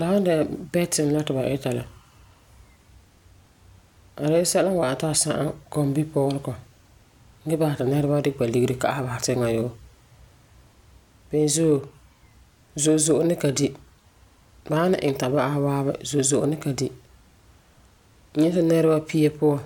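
No technical faults can be heard anywhere in the recording; the speech signal stays continuous and intact throughout.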